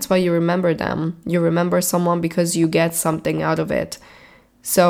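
From 2.64 to 3.63 s, a regular train of clicks, around five at about 4.1 per second and about as loud as the speech, ticks through. It is likely interference, and shows as evenly spaced vertical lines on a spectrogram.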